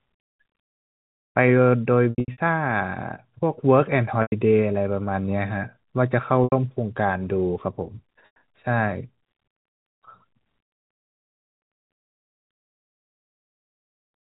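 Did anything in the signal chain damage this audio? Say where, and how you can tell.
Yes, network packet loss with pitch repetition at 2.10–2.38 s, 4.22 s, 6.44 s and 8.26 s. Spectrograms show frozen, repeated harmonic stripes fading out where lost audio was concealed.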